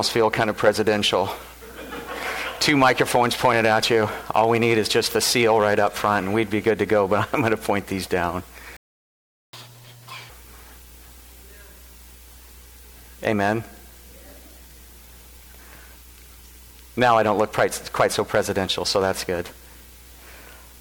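The audio drops out at 8.77 s and stays silent for about 0.77 s until 9.53 s, a playback stall. The player most likely ran dry of data or had its thread blocked, so output simply stopped in mid-flow. From 9.53 s to 10.30 s you get catch-up at higher speed: the backlog is resampled at double speed, so everything runs fast and jumps up around ten semitones in pitch before dropping back to normal once the lost time is recovered.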